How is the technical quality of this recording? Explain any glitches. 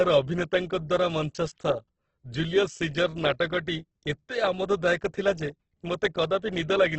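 The technical quality is poor. Heavy Opus compression runs through the whole recording and is likely the cause. The speech is band-limited, with nothing above 8.2 kHz, and sounds grainy and rough. The encoder fills starved bands with folded or noise-like content, which points to a bitrate around 12 kbps in music mode.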